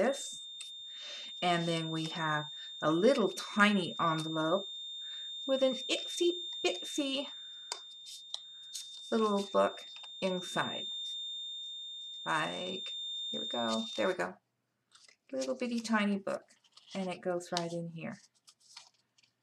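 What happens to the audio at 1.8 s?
At 1.8 s you're hearing a feedback whistle: a thin, steady 3.6 kHz tone sitting roughly 10 dB under the sound, swelling and fading slowly in level, running from the very start to 14.22 s. It's likely a speaker-to-mic loop hovering right at the edge of feedback.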